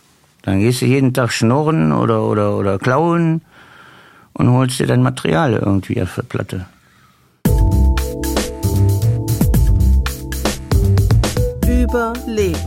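No technical faults can be heard anywhere in this audio.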